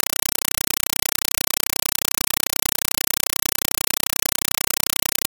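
Throughout, a compressed stream is played as audio: loud static bursts about 5.33 ms long repeat 31.25 times a second, a regular chatter that fits undecoded AC-3, unlike steady broadband noise.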